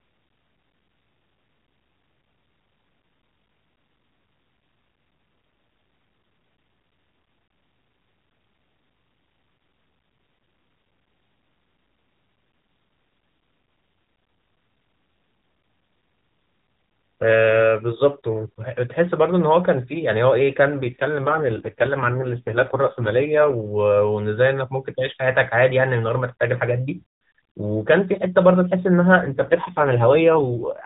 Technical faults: AMR rate drop

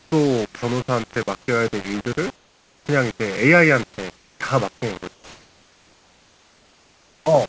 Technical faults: low bit depth without dither; comfort noise in place of the background; sound dropped by the voice detector; onset clipped by the voice detector

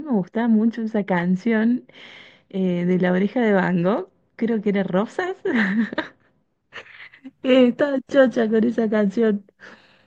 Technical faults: de-emphasis applied wrongly

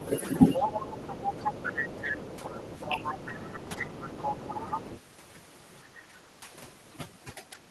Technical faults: overdone noise removal; other side's voice leaking through; speech suppressed in double talk; background gated by the echo canceller

